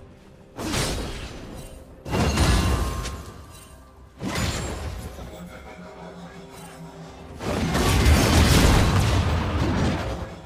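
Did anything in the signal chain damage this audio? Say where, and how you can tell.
Yes. A gritty, inharmonic fizz rides under the loud and high sounds for the whole clip, sitting around 25 dB below the signal. This is crude rate conversion at the sample-rate conversion stage: 32 kHz audio was linearly interpolated to 44.1 kHz without filtering, creating shifted, non-harmonic images.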